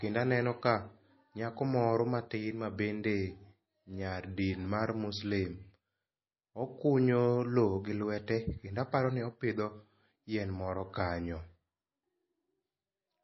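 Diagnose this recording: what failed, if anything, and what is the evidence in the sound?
The codec stage failed, most likely MP3 compression at a very low bitrate. Throughout the speech, nothing sounds above 5.8 kHz, and the damage is plainly audible. Starved of bits, the encoder cut the treble at a fixed point and dropped weak detail, leaving a watery, swirly texture.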